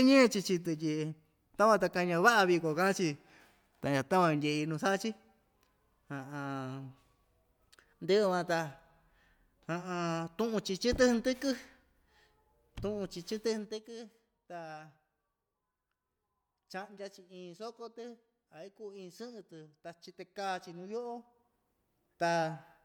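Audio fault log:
13.44 to 13.92 s and 20.52 to 21.76 s, zipper noise: the gain moves in unsmoothed steps of about 2 dB, first down by roughly 10 dB at around fifteen steps a second, then back up by roughly 10 dB at around seven a second. Each jump puts a small discontinuity in the speech waveform, so a fine ticking rides on the sound for as long as the level is moving, faster and denser in the first run than in the second.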